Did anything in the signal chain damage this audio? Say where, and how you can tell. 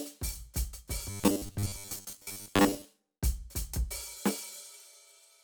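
Yes. From 1.10 to 2.85 s the music collapses into a rigid, metallic buzz pitched at 100 Hz while its rough contour still shows through. This is robotic sound from repeated short buffers, most likely at the driver or buffer stage: fresh audio arrives too slowly, so the same 10 ms block is replayed to fill the gaps and most of the real material in that stretch is skipped. The replay interval imposes the fixed 100 Hz pitch.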